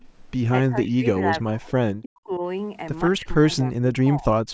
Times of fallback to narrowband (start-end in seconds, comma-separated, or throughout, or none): none